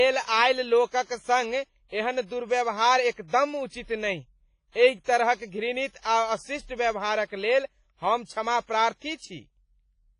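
From the first moment the whole clip carries heavy WMA compression damage, most likely from an older WMA encoder squeezed to something like 24 kbps. Nothing gets through above about 10.4 kHz, so the speech sounds dull and boxed-in. The coarse quantisation leaves a ringing, washy texture with a hiss that swells and fades along with the voice, because the noise is spread across long transform blocks rather than sitting tight under each sound.

Around 3.28 to 3.33 s, between "एहन दुर्व्यवहार" and "उचित नहि", you get a pre-echo. A sharp onset landed late in a coding block, so the noise budgeted for that loud attack also got smeared into the quiet stretch just before it, about 57 ms of it. You hear a brief hiss creeping in ahead of the sound, and the attack itself comes out blunted.

The same thing happens again at roughly 6.00 to 6.05 s, this time spreading about 48 ms ahead of the onset.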